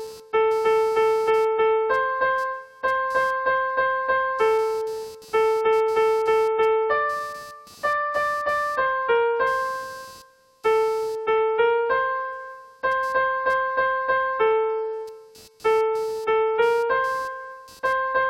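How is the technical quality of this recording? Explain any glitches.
The recording has two technical problems: a computer-activity buzz under the whole clip, and a brief burst of DAB burbling near the end.

Computer activity noise runs throughout. Load changes in the computer's processor, graphics or mouse circuitry shift the ground shared with the audio path. The result is a buzzy, chirping pulse train at around 200 Hz, roughly 30 dB below the signal. It follows the machine's activity rather than the audio.

DAB burbling occurs at 17.25 s. Weak reception lets bit errors, at an error rate of a small fraction of a percent, slip past error correction into the MP2 data. Corrupted sub-band samples add short noise blips and corrupted scale factors make sub-bands jump in level, which points to a couple of damaged frames and produces a short, watery blip.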